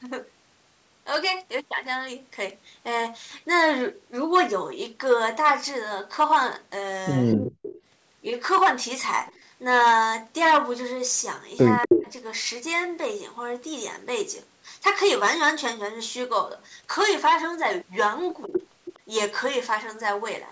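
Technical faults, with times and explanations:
7.32–7.81 s, 9.26–9.39 s, 11.82–12.07 s, 18.44–18.63 s, 18.85–18.99 s: echo leak. A copy of the speech returns 247 ms late, faint near 9.3 s but nearly as loud as the speech near 11.9 s, likely loudspeaker pickup the far end's canceller missed. Spectrograms show harmonic patterns repeated a quarter-second later.
11.86–12.07 s, 18.48–18.52 s: speech suppressed in double talk. While the echo overlaps, the talker drops by about 20 dB for some 200 ms, then briefly by about 5 dB, likely the canceller turning both sides down. The waveform shows a notched envelope, the spectrogram a dimmed band.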